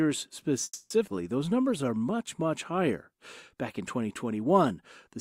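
A call audio freeze from 0.63 to 0.92 s, most likely from delayed packets emptying the jitter buffer, stretches the last sound into a fading buzz or hiss that ends in a brief silence before the audio resumes where it stopped. A skip ahead at 1.06 to 1.09 s drops about a tenth of a second of sound, jumping playback forward almost seamlessly. A jitter buffer slow-down from 1.46 to 2.83 s repeats pitch periods to rebuild its reserve, adding 110 ms and running the audio at 92% speed without changing pitch, so sounds are drawn out.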